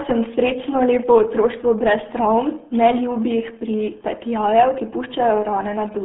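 Throughout, the speech carries RealAudio 14.4 codec damage. Nothing passes above 3.7 kHz. Voices sound muffled and gargly, which fits a heavily squeezed 8 kbit/s stream.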